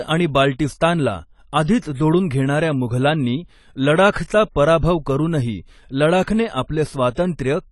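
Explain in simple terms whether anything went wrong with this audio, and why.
Yes, two related problems. The speech was likely squeezed hard by AAC compression, which throws away detail to save space. Nothing remains above about 11.5 kHz, so the voice sounds dull, smeared and fizzy, and the damage is plainly audible throughout.

The same compression also causes pre-echo. It spreads its noise across short blocks of sound, so a sudden sharp sound gets a short hiss just before it. You can hear this from 4.12 to 4.16 s, and again at 6.68 s, right after "करूनही लडाखने".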